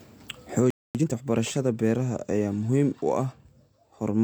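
At 0.70 s the speech cuts out mid-flow and stays silent for about 244 ms, until 0.95 s. This is a playback stall, likely caused by the player running out of buffered data or its output thread being held up.

From 0.95 s to 1.19 s the speech sounds rushed at unchanged pitch. This is time-compressed catch-up: the player works off its backlog at 2.0 times normal speed, removing short slices and cross-fading the joins.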